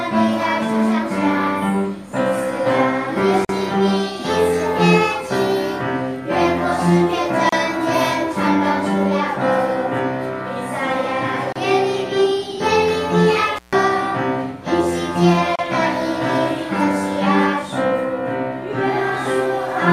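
At 3.45 s the sound drops out for about 44 ms, then resumes exactly where it left off. The same gap at a join of encoded pieces recurs at 7.49, 11.52 and 15.56 s, each about 32 ms, spaced every 4.0 s. The audio was encoded in separate segments and concatenated without removing the encoder's leading delay and final-frame padding, so silence sits at every seam. The codec smears the edges of each gap.

Between 13.56 and 13.75 s there is a separate dropout of about 141 ms caused by an intermittent contact: a loose plug or cable briefly breaks the signal path. The sound cuts out with crackle at the break and again at reconnection, and the open line in between carries a faint residual hiss. Its irregular timing and noisy edges distinguish it from the clean, periodic seam gaps.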